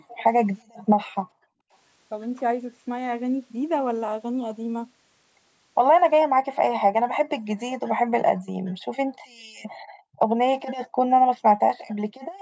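Speech from a call, band-limited to 8 kHz by the microphone processing, with its room background dipping by about 40 dB at 0 to 0.08 s, 0.63 to 1.73 s, 6.94 to 7.49 s, 7.82 to 10.37 s and 10.83 to 12.4 s. This is background gated by the echo canceller, which clamps the microphone while the far end plays. Faint copies of the speech, well below the main level, trail by 440 ms at 0.08 to 0.23 s and 11.78 to 11.86 s. These are likely an echo leak, where loudspeaker sound slipped past the canceller and was sent back.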